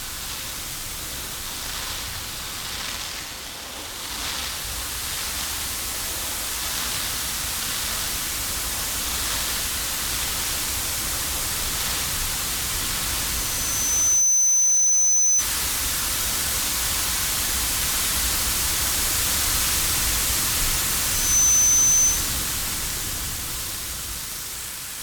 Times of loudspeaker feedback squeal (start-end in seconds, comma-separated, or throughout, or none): 13.23-15.48, 20.96-22.41